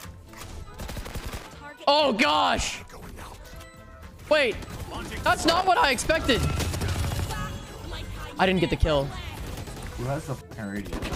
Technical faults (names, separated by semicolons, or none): loose connector crackle